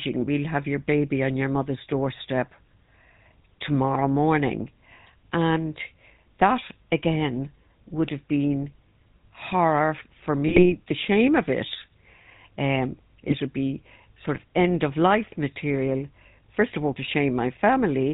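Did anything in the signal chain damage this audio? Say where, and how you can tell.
Yes. At the codec stage, the whole clip has a buzzy, gravelly speech quality with nothing above 4 kHz. This fits the GSM full-rate codec at 13 kbps, which rebuilds speech from a sparse pulse excitation.

On the radio link, GSM bit errors cause squawks and gargling at 10.47–10.73 s, between "horror for" and "the shame of it". They recur at 13.28–13.34 s, before "would be sort of". Corrupted filter, pitch or gain values distort those frames.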